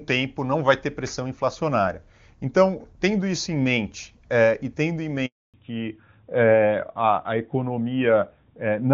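At 5.26 s, right after "é e tendo em", the speech cuts out. This is a handover gap. The call was being moved from one network link to another, and no speech frames got through during the switch. The voice fades within a few tens of milliseconds. Then there is silence for 280 ms, until 5.54 s. Whatever was said in that stretch is gone. Nothing conceals it.

From 5.54 s to the end, the sound changes. This is a fallback to narrowband. Before the gap, the HD Voice link carries the upper band cleanly, with at most faint codec roughness. After it, nothing remains above 4 kHz. The speech turns dull and muffled. Sibilants lose their edge and sound rougher. The switch points to the call landing on an older narrowband codec, which fits AMR-NB after AMR-WB.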